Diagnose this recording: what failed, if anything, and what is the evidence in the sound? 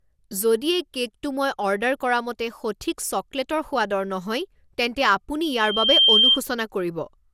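Codec stage: the speech sounds swirly, smeared and hollow throughout, attacks are blurred, and nothing is present above 17.4 kHz. This is generation loss, likely from about ten rounds of MP2 re-encoding at 128 kbit/s. Each pass re-quantised on a shifted frame grid, so noise and spectral holes accumulated.

Analogue acoustic path: from 5.43 to 6.41 s a loudspeaker feedback squeal appears as a 3.2 kHz tone. It builds over roughly half a second to about 10 dB above the speech. The microphone was picking up its own loudspeaker, and loop gain exceeded unity at that frequency.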